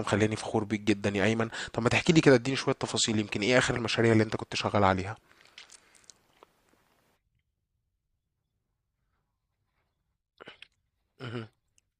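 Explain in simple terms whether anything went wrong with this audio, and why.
At 0.87 s there is a brief skip in the speech: an overlap between stream segments. Two pieces of the stream claimed the same few milliseconds, and the player discarded that stretch, so the waveform jumps. The timing fits 6-second segments.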